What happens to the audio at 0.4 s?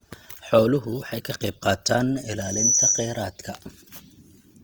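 At 0.4 s the speech sounds grainy and rough, with a noisy texture on its tones, and this persists throughout, likely Opus compression in its CELT mode at a low rate, around 24 kbps. Starved bands are refilled by folding or noise, so a spectrogram shows energy up to 20.2 kHz with few holes but smeared, noise-like detail.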